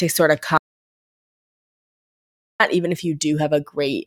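At 0.58 s the input likely dropped out and silence was written: an audio dropout to silence, dead air after "sort of" until "even if" at 2.60 s.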